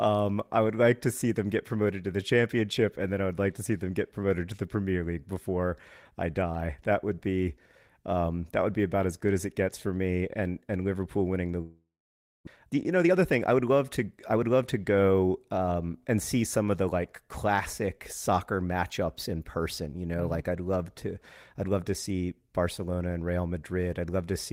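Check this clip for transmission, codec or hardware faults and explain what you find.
Two faults are audible, one right after the other.

Long network dropout, 11.61 to 12.49 s: the sound breaks off, and for a short moment the last bit of audio is stretched into a fading buzz before about 590 ms of near silence. The likely cause is a stretch of packets that never arrived in time. The receiver filled the gap with that fading continuation, and about 600 ms of the original speech was never played. When the sound resumes, the lost part is simply gone, and the stream is now running roughly a fifth of a second behind.

Jitter buffer speed-up, 12.56 to 14.49 s: straight after the gap the speech runs about 12% fast but keeps its normal pitch, so it sounds hurried. The delayed audio had piled up in the buffer, and to work off that extra delay the receiver repeatedly cut out tiny slices, one or a few pitch periods long. 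Together they remove around 200 ms over nearly two seconds.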